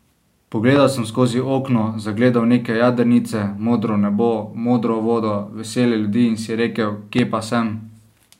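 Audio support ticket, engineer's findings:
Loud pop at 0.76–0.79 s and 7.19–7.21 s: single sharp transient, about 15 dB above the speech, which continues underneath. Likely a voltage step from a plug, switch or static.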